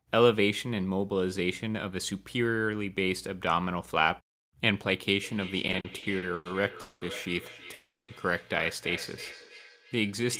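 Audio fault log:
5.23–10.39 s, feedback echo between two devices: from here to the end, the sound comes back roughly every third of a second, peaking about 14 dB below the speech. Another device in the room is replaying this call into the mic, and the local echo canceller can't remove audio it didn't play.
5.67–7.03 s, repeated stalls (stutter): eight short hangs, the longest 200 ms, about 460 ms of filler in total, roughly a third of that stretch. Packets kept arriving late, so the jitter buffer kept running dry and the receiver stretched the last sound each time. Nothing's lost, but it drags and stutters.
7.73–8.10 s, call audio freeze: the sound holds and fades for 350 ms, with about 210 ms of that going fully silent, then picks up where it left off with nothing missing. The likely cause is packets held up in transit emptying the jitter buffer, which left playback running about 350 ms later afterwards.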